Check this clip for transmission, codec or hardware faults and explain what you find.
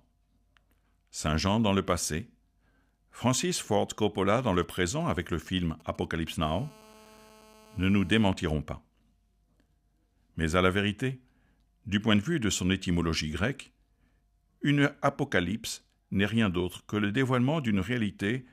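Two closely linked hardware interference faults appear, both caused by a 2G phone close to the recording chain, running from about 4.39 s to 8.28 s.

GSM signalling bursts, 4.39 to 6.44 s: the phone is exchanging short control transmissions rather than carrying a call, and the audio circuitry rectifies each radio burst into an audible pulse. The result is a galloping dit-dit-dit of brief buzzes pulsing at about 217 Hz, roughly 25 dB below the speech. On a spectrogram it shows as short vertical stacks of evenly spaced harmonic lines that start and stop in groups. The waveform shows clusters of sharp spikes.

GSM phone buzz, 6.44 to 8.28 s: the phone has moved into a call, so its transmitter now pulses continuously at 216.7 times a second, and the rectified envelope becomes a nearly steady raspy buzz at about 217 Hz with strong harmonics, about 27 dB below the speech and unrelated to it. A spectrogram shows an unbroken comb of horizontal lines at multiples of 217 Hz reaching well into the kHz range. 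The waveform carries a regular train of spikes about 4.6 ms apart.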